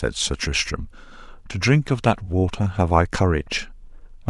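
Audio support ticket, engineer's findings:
Listened through the speech clip and found nothing that warrants a finding.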